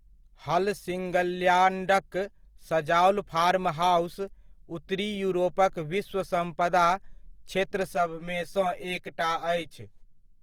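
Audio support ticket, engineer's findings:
Throughout: grainy, rough, noise-filled texture on speech, full bandwidth to 20.2 kHz. Likely Opus compression in CELT mode, noise-filling starved bands; damage fits roughly 24 kbps.

7.95 s to end: hollow, phasey sound. Channel delay (comb filtering): one channel about 10 ms late, summed to mono, notches from about 50 Hz, spaced every 100 Hz.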